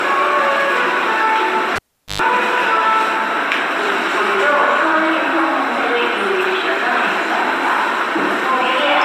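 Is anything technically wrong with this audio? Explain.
Yes, there's a cable pulled and plugged in between about 1.76 and 2.22 s. A live lead gets yanked out, giving a pop, and the sound drops to near silence for roughly 0.41 s. As the plug goes back in, the tip touches before the sleeve grounds, so there's a burst of 50 Hz mains buzz lasting about 0.11 s. Then a second pop as the connection seats and the sounds come back.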